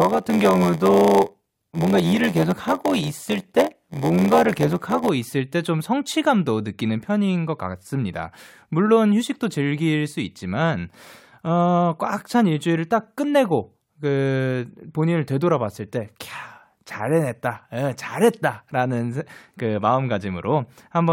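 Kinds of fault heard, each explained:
Block size mismatch (padded): one stage hands over shorter blocks than the next one reads, so each block ends in a bit of silence. That gives the speech a buzz at about 86 Hz, fitting 512-sample reads, and it runs about 6% slow with its timbre kept.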